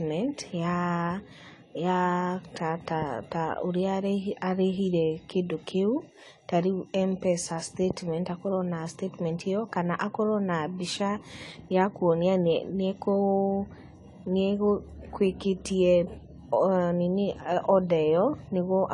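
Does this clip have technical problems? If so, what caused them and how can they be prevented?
Yes. Throughout the speech the sound is dull and smeared, with nothing above about 11.4 kHz and a watery, fizzy texture on sibilants and held vowels. This is likely AAC compression: the encoder, at a rate that fits roughly 32 kbps AAC-LC, has discarded high frequencies and coarsely quantised the rest, leaving gaps in the spectrum that warble from frame to frame. Preventing it means encoding at a higher bitrate, or keeping a lossless copy for any processing.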